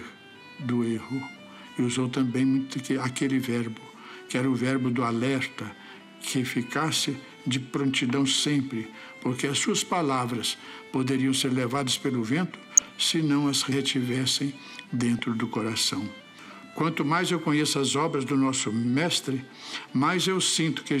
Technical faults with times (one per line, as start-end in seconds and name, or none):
12.77-12.97 DAB burbling
15.19-15.23 DAB burbling